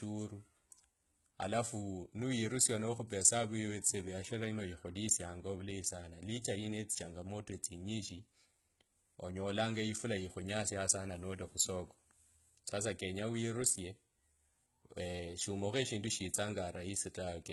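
From start to finish the speech carries heavy damage that is likely from HE-AAC compression at a very low bitrate, around 16 kbps. The upper band is synthesized rather than coded: copied lower bands are shifted upward under a coarse envelope, so s sounds come out gritty, metallic and lispy. On a spectrogram the treble looks smeared and blocky, with harmonics failing to line up across the crossover, and nothing appears above 11.8 kHz.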